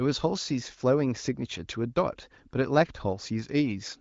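No technical faults can be heard in the speech. It carries the sound of the AMR wideband (HD Voice) codec, with content stopping at about 7.6 kHz and coding damage faint at most, which fits one of the higher AMR-WB rates.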